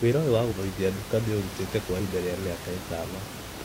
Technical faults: compressed frames skipped

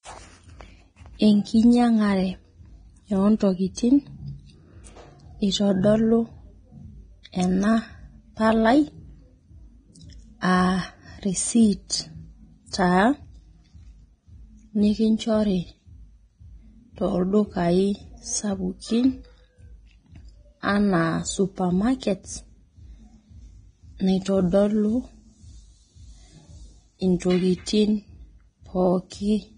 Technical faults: Vorbis compression

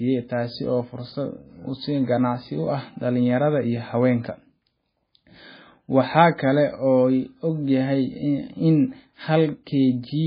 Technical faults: MP3 compression

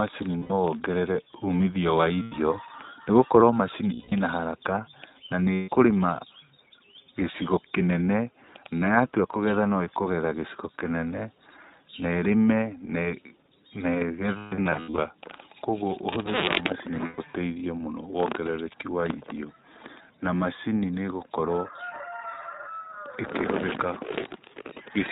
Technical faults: iLBC codec; lost iLBC frames

